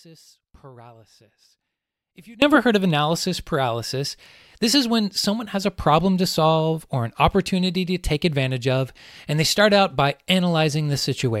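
From the very start until 2.42 s the speech is nearly gone, leaving only a faint trace of sound roughly 25 dB below its normal level; it then snaps back abruptly on "heard of analysis paralysis". This is an audio dropout to a faint residue, already under way when the clip begins. The likely cause is a break in the wanted signal while the path after it stayed live and carried only that faint sound.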